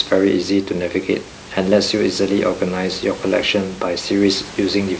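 No technical faults are audible.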